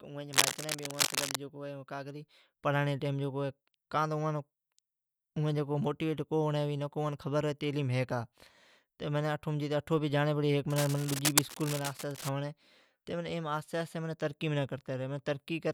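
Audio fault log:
0.33 to 1.37 s, cable scratch noise: a dense, uneven rustling scratch sits over the speech at about the same level, so it competes with it directly. This is likely a worn cable or connector being moved, its contact resistance jumping rapidly. The bursts are clustered and irregular rather than evenly spaced like hum or isolated like a single dropout click.
10.70 to 12.29 s, cable scratch noise: a similar ragged scratching, about 5 dB below the speech, likely again from movement at a poor contact.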